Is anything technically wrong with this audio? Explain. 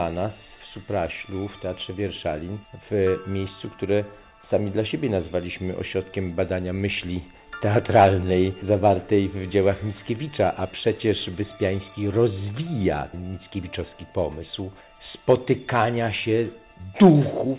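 No, nothing stood out as technically wrong on listening to this audio.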